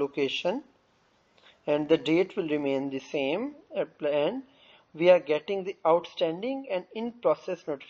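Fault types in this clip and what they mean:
Adaptive stream at a lower bitrate: at 2.82 s the audio switches abruptly, with no gap, to a much coarser encoding that lasts to the end. Nothing is left above 6.5 kHz, so the top end sounds dull, and compression artefacts increase. The sudden treble loss fits a player stepping down from something like 128 kbit/s MP3 to around 32 kbit/s after the connection slowed.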